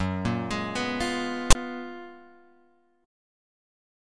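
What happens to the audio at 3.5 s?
Nothing goes wrong at 3.5 s; the audio plays through that moment intact, with no dropout, click or other fault.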